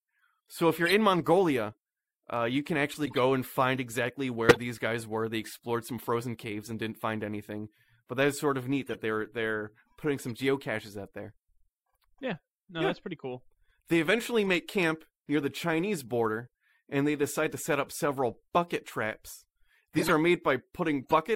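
Corrupt frames were decoded at 0.86–0.93 s, 3.06–3.19 s (between "uh you can" and "and find exactly"), 4.49–4.61 s (just before "guys were"), 8.87–9.01 s, 10.35 s (after "they're they're putting some"), 14.47 s, 19.97–20.11 s and 21.02–21.12 s. Each time, a few damaged compressed frames were played anyway, with corrupted gains and codes putting energy in the wrong bands. The result is short chirps and noise bursts in the speech, loudest near 4.5 s at about −10 dBFS and quietest at 10.35 s, around −50 dBFS.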